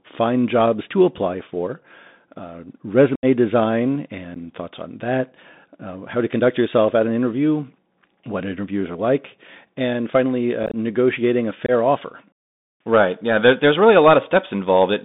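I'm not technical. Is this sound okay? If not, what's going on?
No. The whole clip has the sound of a Bluetooth CVSD headset codec. This old phone-call link only carries a narrow band, so nothing above about 4 kHz gets through. The speech sounds muffled and boxy, the s sounds come out scratchy, and a grainy hiss sits underneath.

There are also four short dropouts from unconcealed Bluetooth headset packet loss. Bits of audio between the headset and the phone went missing, and nothing filled the gaps. You can hear a gap of about 75 ms at 3.15–3.25 s. A tiny blip at 4.34–4.37 s comes right before "thoughts on that uh". A choppy patch at 10.63–10.75 s falls between "are like and finally" and "negotiating a". Another brief hole at 11.66–11.70 s comes just after "negotiating a".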